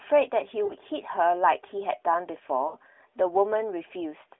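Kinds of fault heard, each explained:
Lost AMR speech frames: at 0.66 to 0.74 s and again at 2.68 to 2.76 s, the speech smears into a held, warbling sound that sinks in level, then returns briefly weak and rough. The 40 ms and 60 ms gaps fit two and three missing 20 ms frames. Radio errors corrupted those frames, so the decoder kept reusing the last good pitch and vocal tract settings at falling gain, within the narrowband 300 Hz to 3.5 kHz line.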